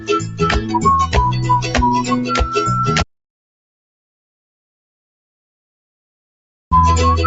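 From the very start to 0.41 s the sound sits low, sinking by about 10 dB at its deepest, then a second dip follows from 0.6 to 0.79 s, about 6 dB down. This is sound cut by the noise suppressor: the suppressor misjudged steady parts of the signal as background noise and pulled them down harder than the rest, so the opening sinks in level for roughly 300 ms and then roughly 200 ms.

At 3.02 s the audio stops dead and stays in total silence until 6.71 s, a gap of 3.69 s with no room tone at all before the sound resumes mid-flow. This is an audio dropout to silence. The likely cause is that the input was lost for that stretch while the recording carried on writing silence, so whatever happened during the gap is simply missing. The call path's limit of 8 kHz is audible as a ceiling on the high end throughout.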